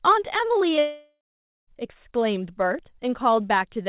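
At 0.76 to 0.79 s, short concealed packet loss leaves a brief smear where about 20 ms never arrived and was patched by extending the preceding sound. At 0.79 to 1.69 s, a long network dropout is the likely cause of the gap. The sound is drawn out as a fading buzz or hiss, then leaves about 470 ms of silence. As with the earlier blip, the audio resumes without the lost portion. Throughout, nothing above 4 kHz is heard, consistent with a G.711 call codec.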